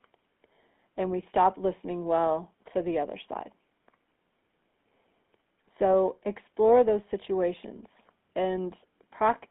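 Throughout the speech a plainly audible buzzy, gravelly roughness sits over a narrow 200 Hz to 3.5 kHz band. This is the GSM full-rate codec: speech is rebuilt from a vocal-tract filter driven by sparse regular pulses, which fits a 13 kbps stream.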